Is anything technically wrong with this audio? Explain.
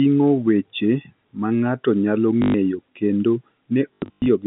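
Yes, there's packet loss with the last packet repeated, heard twice over the telephone-band G.711 line. At 2.42 to 2.54 s, 120 ms goes missing and the receiver keeps replaying the previous packet. The loops seldom line up with the pitch, and the run buzzes at about 50 Hz, which fits 20 ms packets. From 3.94 to 4.26 s it's worse: 240 ms lost, scattered over 320 ms, with the longest run 100 ms. Both come across as short robotic stutters.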